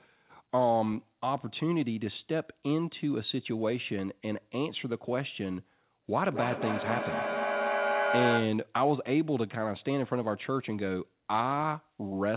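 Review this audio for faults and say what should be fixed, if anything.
Feedback echo between two devices, 6.16 to 8.66 s: a second nearby device replays the sound into the microphone, so it returns about every fifth of a second, as loud as the speech. Use headphones, or mute the second device's loudspeaker, so that only one device in the room plays the call.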